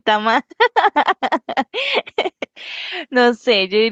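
Nothing in the signal of this short speech recording points to a technical fault at any point.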